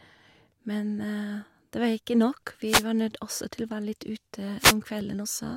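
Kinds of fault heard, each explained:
Wireless microphone noise hit: the FM radio link fades as reflected signals cancel, letting receiver hiss surge into brief static swishes, from 2.66 to 2.85 s just before "var nødt også til" and from 4.58 to 4.75 s; spectrograms show broadband noise bursts, waveforms short ragged amplitude blooms.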